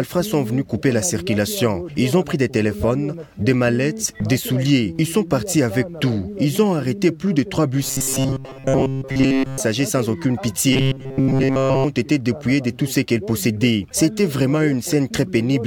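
From 7.83 to 9.60 s the sound collapses into robotic sound from repeated short buffers, with a rigid metallic buzz at 134 Hz, and it happens again from 10.73 to 11.84 s. The likely cause is audio arriving too late, so playback keeps looping a slice of about 7.5 ms. In the first stretch most of the sound is replaced by those loops. The second is loops throughout, so nothing real gets through there.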